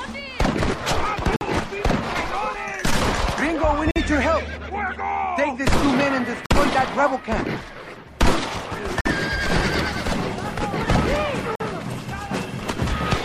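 Gaps between chunks break the sound at 1.36, 3.91, 6.46, 9.01 and 11.55 s. Each is a silent hole of about 48 ms. The audio arrives in 2.5 s pieces, and silence is inserted at every join while nothing is removed. The result is a regular stutter. A waveform shows flat near-silent strips at steady spacing, and a spectrogram shows thin blank vertical bands cutting across all frequencies.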